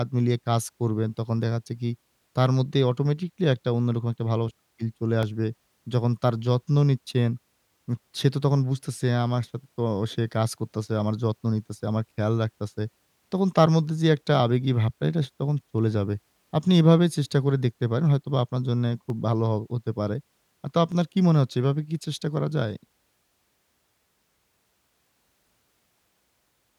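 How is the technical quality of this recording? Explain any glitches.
The speech carries four isolated clicks, at 5.23, 8.21, 19.1 and 20.92 s. Each sounds like dropped samples: under a millisecond of audio is likely missing, so the waveform jumps abruptly to a later value. Each is heard as a sharp tick and seen as a thin vertical line across the spectrogram.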